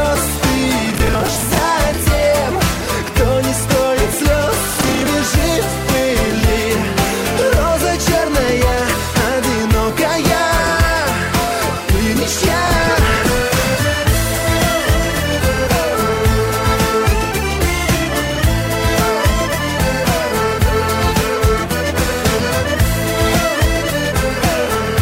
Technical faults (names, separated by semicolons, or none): processor overload crackle